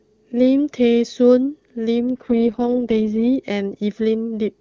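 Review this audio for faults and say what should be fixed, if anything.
Between 1.98 and 3.25 s there's an AMR rate drop: the speech suddenly turns rough, raspy and more synthetic, then clears up again. Bandwidth stays put and nothing drops out. The AMR-WB link has fallen from its clean top rate (around 23.85 kbit/s) to what sounds like the 6.6 kbit/s mode, spending bits on error protection instead of on the voice. You'd prevent it by improving radio coverage or signal quality so the network doesn't need to step the codec down.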